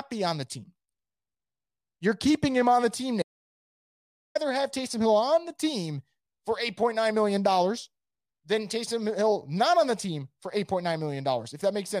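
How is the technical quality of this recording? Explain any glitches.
The recording has one glitch. From 3.22 to 4.35 s, an audio dropout to silence: the input was likely lost while recording continued, so the speech cuts to total silence for about 1.13 s, with no room tone.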